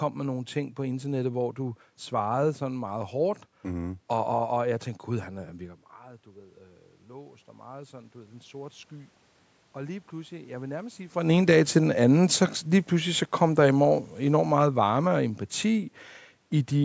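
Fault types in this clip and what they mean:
Automatic gain rising: the input fell about 19 dB, so the control raised gain about 8 dB from 5.57 to 8.95 s, swelling speech and room noise together.
Automatic gain falling: after "så lige pludselig så", the control judged the input too loud or its background noise too strong and lowered gain about 4 dB from 13.35 to 15.92 s.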